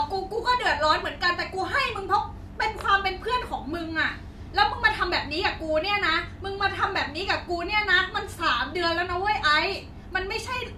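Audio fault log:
No faults heard.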